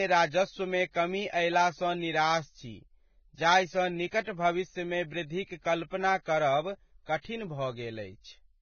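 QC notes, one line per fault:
Throughout: low-bitrate audio saved at a high bitrate. Nothing in this speech sits above 6.6 kHz, so it sounds dull and boxed-in, with the artefacts of the first encoding still present. The cause is likely a low-rate first encode, something like a Vorbis file around 16 kbit/s, later re-saved at a generous rate, perhaps a 256 kbit/s MP3. The bigger file can't bring back what the first pass threw away, so the damage stays baked in.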